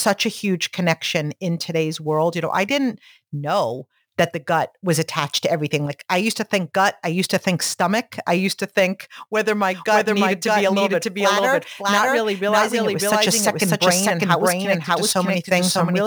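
Throughout the speech there is a fine hiss and grittiness that tracks the signal: it thickens on loud passages and sibilants and drops away completely in pauses. That is sample clock jitter. The converter's clock wanders by a few microseconds, so each sample is taken slightly off time, and the error is largest where the waveform moves fastest, sitting roughly 25 dB below the signal. A steady noise floor or dither would stay audible in the gaps; this does not.

From 9.74 s to the end, a doubled audio track appears. A full-band second copy of the speech runs about 0.7 s behind the original at roughly equal loudness, so the speech is repeated over the words that follow it. The likely cause is the same audio being captured twice, once through a slower path. It starts abruptly, and the late copy has no decay, no dulling and no room colour. That separates it from an acoustic echo or reverb tail, which would fade and take on the character of a space.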